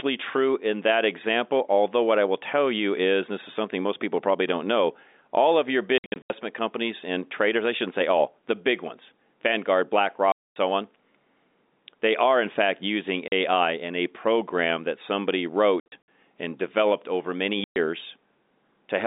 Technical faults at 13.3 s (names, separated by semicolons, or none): packet loss filled with silence